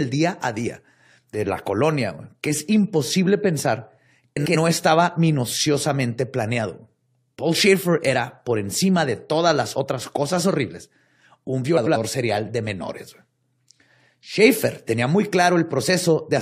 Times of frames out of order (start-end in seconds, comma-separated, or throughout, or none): 4.36-4.56, 11.77-11.96